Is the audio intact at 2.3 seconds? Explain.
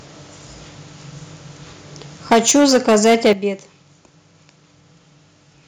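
No. At 2.31 s the speech runs into microphone overload that lasts until 3.33 s. The peaks sit about 10 dB above what the converter can represent, so their tops are flattened, and around a tenth of the samples in that stretch are clipped. The flattening adds a harsh, crackling edge to the loudest syllables, most likely because the microphone's input volume was set too high.

At 2.33 s, just after the distortion starts, the microphone volume is stepped down by about 3 dB. Speech and background drop together in one abrupt step rather than fading. This is likely call software reacting to the clipping by lowering the device's input volume. Because the peaks exceed the limit by about 10 dB, a 3 dB reduction is not enough, and the crackle continues until 3.33 s.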